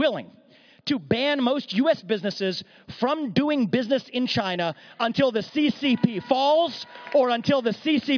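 Nothing technically wrong can be heard anywhere in this audio.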